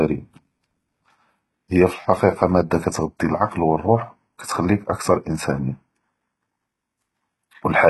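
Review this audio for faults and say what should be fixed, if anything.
Throughout the speech, the treble sounds synthetic and the s sounds are gritty and lispy. Nothing comes through above 11.8 kHz. This is likely HE-AAC compression, with band replication copying lower bands upward. The heavy damage fits a bitrate near 16 kbps. To prevent it, encode at a higher bitrate or with plain AAC.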